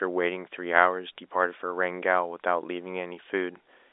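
No technical faults occur in this speech, which carries the narrow telephone band of G.711 coding with nothing above about 3.8 kHz.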